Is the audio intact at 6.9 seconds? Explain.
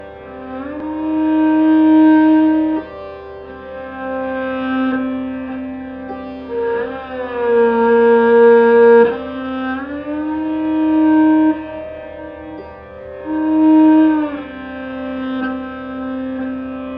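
No. A wrong sample rate runs through the whole clip: audio recorded at 32 kHz plays at 48 kHz, so at 6.9 s everything runs 1.5 times fast and about 7 semitones high.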